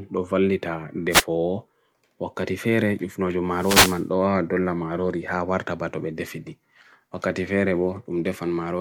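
A short swish of static at 1.10 to 1.24 s, then a longer burst from 3.51 to 4.07 s, washes over the speech. These are wireless microphone noise hits: reflections cancel the FM radio signal, so receiver noise rises.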